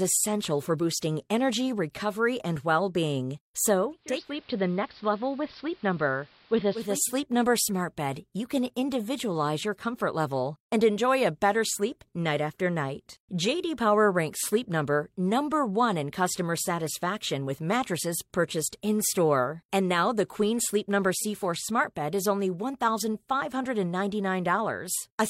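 Just after "recovery and well being", at 3.92 s, the digital radio blends to analogue: the receiver loses the digital stream and cross-fades over about 0.47 s to the AM broadcast of the same station, returning at 7.14 s. The speech drops by about 2 dB, sounds duller and gains a faint hiss well beneath it. The gradual fade in and out, with hiss arriving alongside the dulling, separates this from a plain low-pass filter or a dropout.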